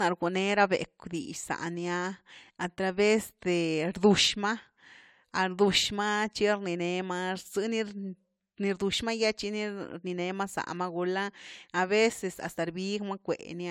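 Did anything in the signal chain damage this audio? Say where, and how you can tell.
Yes, at the codec stage, all the way through the speech: it's swirly, smeared and hollow, with softened attacks, worse than 96 kbit/s AAC-LC should sound. That's generation loss, likely from a few encode passes, each re-quantising on a shifted frame grid and stacking up the damage.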